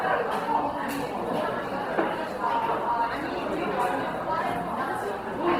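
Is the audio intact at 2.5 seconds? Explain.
No, at 2.5 seconds you're hearing Opus compression, and it runs through the whole clip. The sound is grainy and rough, which is most likely Opus in its CELT mode filling starved bands with folded or noisy content, consistent with about 16 kbps, even though the bandwidth still reaches up to 20.2 kHz.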